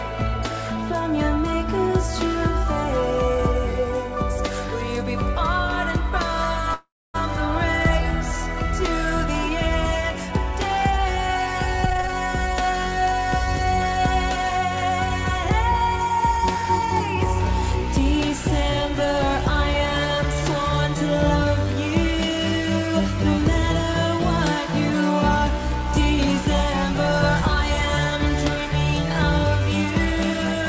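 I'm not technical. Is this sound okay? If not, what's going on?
No. Around 6.74 to 7.16 s the sound stalls for about 0.4 s. The last bit is stretched out, then there is roughly a quarter-second of silence, and it picks up exactly where it stopped, with nothing lost. This is a call audio freeze, likely caused by delayed network data.

Jitter buffer speed-up happens three times. The sound plays faster while keeping the same pitch: 117% from 11.83 to 13.42 s, trimming roughly 0.3 s; 103% from 13.86 to 15.44 s; and 107% from 16.09 to 16.65 s. The call system was catching up after the delay. The sound also stops at 8 kHz, as expected from this call codec.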